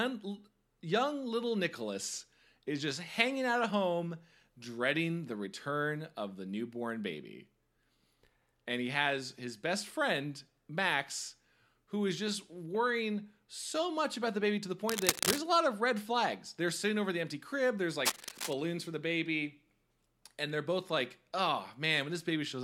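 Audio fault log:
14.88–15.39 s and 18.05–18.54 s, cable scratch noise: dense, uneven scratching bursts after "the baby to the" and "the empty crib there's", the first about as loud as the speech and the second about 5 dB quieter, likely from a worn cable or connector being moved and its contact resistance fluctuating.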